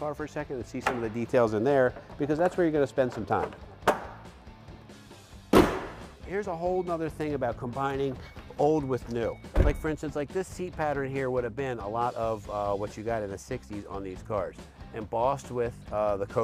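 Nothing here calls for comment, as the audio runs along steadily with no audible glitches, dropouts or other technical trouble at any point.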